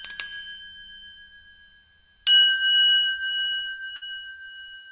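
At 3.96 s there's a burst of packet loss: the receiver stretches the last sound into a fading fill for about 54 ms, then jumps ahead, dropping roughly 60 ms.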